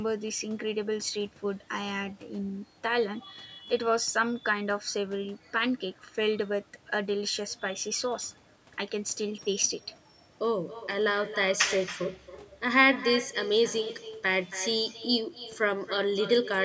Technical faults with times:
0.00-16.64 echo with no canceller

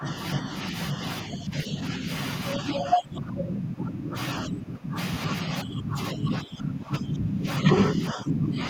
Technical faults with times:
0.00-0.52 speech suppressed in double talk
1.24-2.08 speech suppressed in double talk
2.55-4.16 speech suppressed in double talk
4.44-4.97 speech suppressed in double talk
5.27-8.66 speech suppressed in double talk

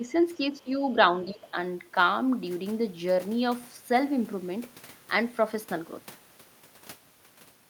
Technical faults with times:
0.00-0.83 speech suppressed in double talk
1.25-1.56 speech suppressed in double talk

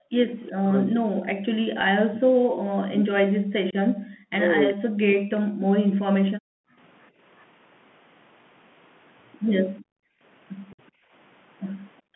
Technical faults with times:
0.00-12.15 Bluetooth CVSD headset codec
0.00-0.05 speech suppressed in double talk
0.49-2.50 speech suppressed in double talk
2.81-6.52 speech suppressed in double talk
3.71-3.75 unconcealed Bluetooth headset packet loss
4.69-4.73 echo leak
9.81-10.21 background gated by the echo canceller
10.73-10.80 unconcealed Bluetooth headset packet loss
10.91-11.12 background gated by the echo canceller
12.02-12.15 background gated by the echo canceller

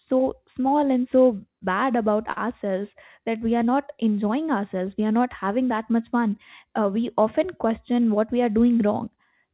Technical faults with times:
2.32-2.38 short stall from a late packet
7.94-8.34 jitter buffer speed-up

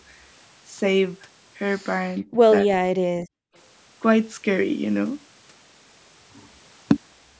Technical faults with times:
1.99-2.40 speech suppressed in double talk
2.65-3.22 speech suppressed in double talk
3.50-3.54 background gated by the echo canceller

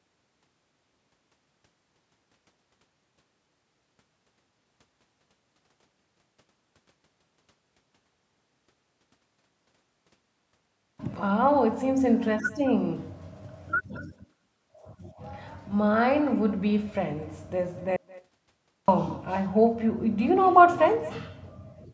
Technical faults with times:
0.00-21.94 echo with no canceller
17.96-18.88 audio dropout to silence

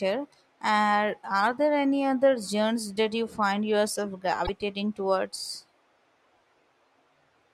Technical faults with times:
4.43-4.49 damaged data in a compressed stream

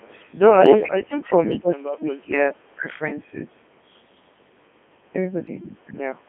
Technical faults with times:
0.00-6.28 Codec 2 vocoder
0.80-2.37 speech suppressed in double talk
1.50-1.71 echo leak

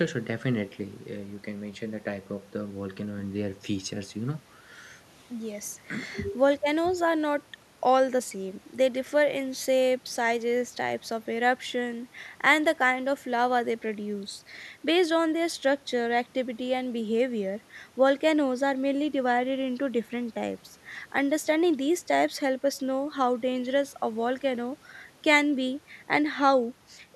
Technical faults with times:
none

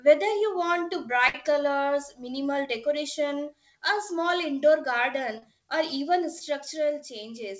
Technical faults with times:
1.28-1.35 burst of packet loss
5.38-5.43 short concealed packet loss
6.39-6.41 short concealed packet loss

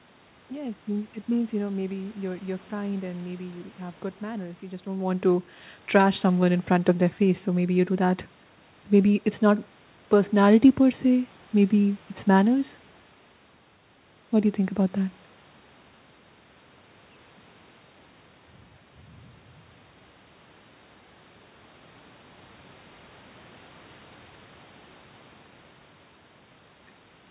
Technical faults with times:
none

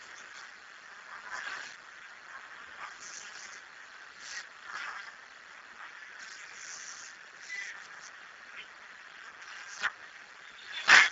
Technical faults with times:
0.00-11.11 Speex codec

